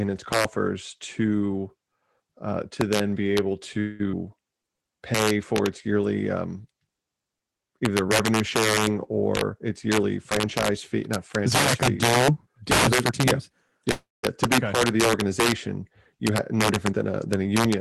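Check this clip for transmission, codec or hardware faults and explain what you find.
Several faults are audible in this speech clip. They come from a fixed-point overflow and from the receiving side of a call struggling with irregular packet timing.

Integer overflow runs through the whole clip. Loud passages were pushed about 10 dB past full scale in integer arithmetic that wrapped instead of saturating. Around one percent of samples exceeded the limit, and each one flipped to the opposite extreme of the range. The result is harsh, violent cracks on every loud peak, far more abrupt and brittle than ordinary clipping.

A call audio freeze occurs from 3.79 to 4.01 s and again from 13.91 to 14.25 s. The likely cause is packets held up in transit until the jitter buffer ran dry. In the first freeze, the receiver stretched the last sound into a fading buzz or hiss for about 0.2 s, then resumed exactly where it had stopped, so nothing is lost but a pause is inserted. 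The second freeze lasts about 0.32 s, and 0.2 s of it drops fully to silence before the speech picks up again.

A skip ahead follows at 4.11 to 4.15 s. Roughly 0.1 s of audio was discarded while later audio was already queued. Playback jumps forward through a tiny 14 ms join. The sound either side of it butts together almost directly, with a small chunk missing.

A jitter buffer slow-down runs from 4.51 to 5.38 s. With its reserve depleted, the receiver repeated individual pitch periods over and over, adding 91 ms in total. The speech plays at 90% speed while keeping its pitch, so syllables sound drawn out.

A jitter buffer speed-up happens twice. The first runs from 9.54 to 13.51 s at 105% speed, removing about 0.2 s. The second runs from 16.19 to 17.47 s at 107%, removing about 0.1 s. In both cases the buffer held more audio than its target, so it trimmed short pitch-period slices repeatedly. 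Pitch stays the same but delivery sounds hurried.

All of this sits on a call codec path whose band limit of about 12 kHz dulls the top end, which fits a 32 kbps Opus setting.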